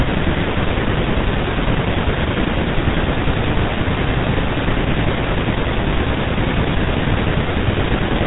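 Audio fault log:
Throughout: GSM full-rate codec. The speech is cut off above 4 kHz and carries a buzzy, gravelly roughness from the pulse-driven vocal-tract model, which fits a 13 kbps full-rate stream. That texture sets it apart from clean telephone band-limiting, which only dulls the sound.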